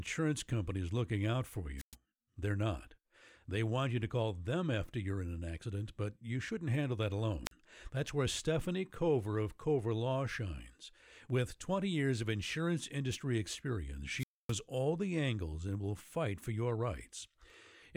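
Speech with three wireless microphone squelch dropouts: after "is looking out for" at 1.77–1.95 s (115 ms mute), after "you shouldn't handle that" at 7.45–7.52 s (42 ms), and after "of insurance industry experience" at 14.17–14.54 s (261 ms, before "all the angles and"). Each time, the FM signal fades, hiss rises, and the receiver mutes the audio.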